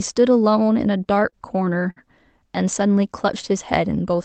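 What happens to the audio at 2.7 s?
Nothing goes wrong at 2.7 s; the speech carries on intact through that moment, with no dropout, glitch or distortion.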